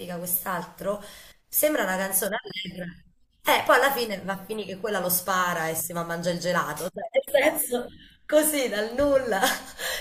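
From 7.65 s to the end, channel delay (comb filtering) sets in: one channel runs about a sample late, and summing to mono cancels content near 20 kHz. The top of the audio turns dull, but through a fixed notch rather than a sweeping phaser.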